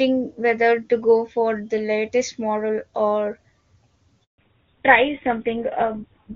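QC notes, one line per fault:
4.24 to 4.38 s, handover gap: the speech dies away within a few tens of milliseconds and the line goes silent for 140 ms. This is the call being moved from one network to another, with no speech frames arriving while the switch completes, so whatever was said in that window is lost. The sound resumes at 4.38 s, once the new link starts delivering frames.
4.38 s to end, fallback to narrowband: from the return of sound onward, nothing is present above 4 kHz and the speech becomes duller and rougher than before the gap. Before 4.24 s the HD Voice path was running wideband with clear, extended treble, which fits AMR-WB at around 23.85 kbit/s. After the handover the call appears to have dropped to an older narrowband codec, consistent with GSM full rate at 13 kbit/s.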